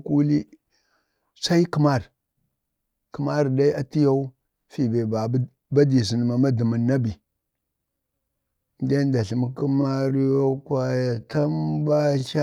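From 9.43 s to the end, the speech abruptly slows to roughly half pace (0.526x) with pitch unchanged: a time-stretched section. It likely comes from software lengthening the audio by repeating short segments, which makes it drag.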